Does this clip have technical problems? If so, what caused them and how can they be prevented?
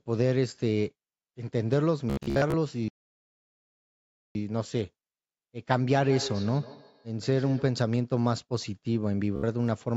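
Yes. Bluetooth stutter at 2.10–2.54 s and 9.36–9.43 s: lost or late wireless packets made the receiver replay short slices, producing a rapid buzzing repeat. Keep the headset close, with fewer competing 2.4 GHz devices.

A playback stall at 2.88–4.35 s cuts the sound to silence for about 1.5 s, likely because the player's buffer ran dry or its thread was blocked. Use larger playback buffers and avoid heavy CPU load during calls.

Feedback echo between two devices at 5.94–7.91 s: the sound returns roughly every 150 ms, at about 13 dB below the speech, as a second nearby device replays and re-captures it. Mute or remove the second device from the call when sharing a room.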